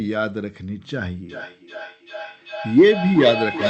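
From 1.3 s to the end of the speech, a feedback echo between two devices can be heard. A second device in the room replays the call, and this microphone picks it up again. Its own echo canceller cannot remove that sound. Each stretch returns roughly every 0.4 s, at its loudest about 7 dB below the speech, and grows thinner and more ringing with each pass. Room reverberation is a smooth decay, but this echo comes back as distinct repeats at that fixed spacing. The Opus call path's high-frequency limit at 8 kHz remains audible underneath.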